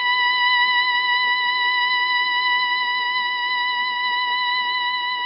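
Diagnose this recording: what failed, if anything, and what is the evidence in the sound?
The music sounds rough and smeared from start to finish, with a hissy, grainy halo around it and nothing above about 5.4 kHz. The failure is at the codec stage, and the likely cause is Nellymoser compression at heavy settings, fitting a bitrate around 22 kbps. This codec spends a fixed, tiny bit budget on each short block, gives quiet bands no bits at all, and fills them with noise. That produces the underwater blur and the noisy fizz in place of real detail.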